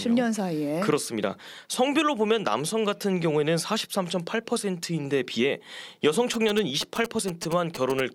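From 6.34 to 8.01 s, GSM signalling bursts break in: a nearby 2G phone's radio pulses are rectified by the audio circuit, giving a galloping dit-dit-dit of short 216.7 Hz buzzes, roughly 10 dB under the speech. A spectrogram shows evenly spaced harmonic stacks; the waveform shows clustered spiky pulse trains.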